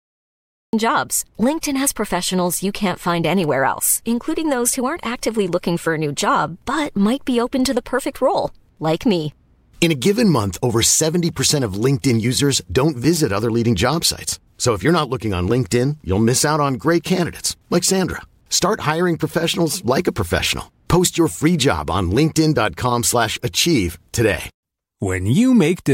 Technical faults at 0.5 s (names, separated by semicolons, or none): cut-off start